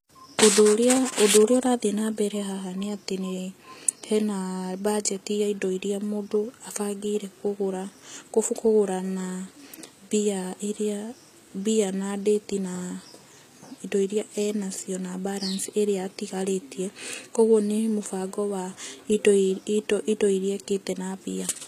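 A speech recording whose treble sounds synthetic and disconnected from the lower range for its whole length, with nothing above about 14.9 kHz. The likely cause is HE-AAC compression at a bitrate around 20 kbps, rebuilding the upper band by copying lower bands upward, which audibly damages the sound.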